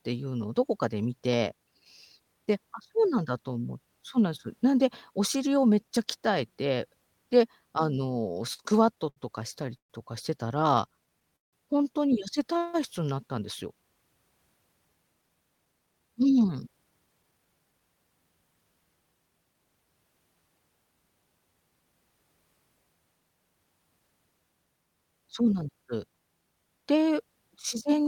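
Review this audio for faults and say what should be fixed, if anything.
Repeated stalls (stutter) occur at 8.35–9.18 s (seven gaps, longest 72 ms, about 170 ms filled) and 10.77–11.55 s (five gaps, longest 167 ms, about 198 ms filled). Packets arrived late, so the receiver kept stretching the last sound until it could continue. Unlike a single freeze, these are many short hitches in a row. Size the jitter buffer for the network's real arrival variance.

A call audio freeze at 9.77–9.92 s inserts a pause of about 125 ms, almost all of it silent, and the audio then resumes where it stopped with nothing lost. The likely cause is packets held up in transit draining the jitter buffer. It is one clean gap, not repeated stutter. Reduce upstream congestion or prioritise voice packets.

Jitter buffer slow-down runs at 10.60–11.31 s (94% speed, 54 ms added) and 12.59–13.40 s (92% speed, 72 ms added). 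Single pitch periods were repeated to rebuild reserve, so the speech drags at an unchanged pitch. Use smaller, less frequent delay adjustments.

Jitter buffer speed-up at 15.22–17.81 s plays at 113% speed, with roughly 0.4 s removed. A surplus of buffered audio was trimmed by cutting short pitch-period pieces, so the speech sounds hurried at a normal pitch, where a stall would add gaps. Drain excess delay more gradually.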